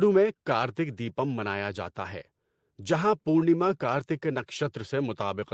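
Speech, with no technical fault to be heard. The sound has been through a call's microphone processing and an Opus-coded WebRTC call path, which leave nothing above 8 kHz, as expected for a wideband call.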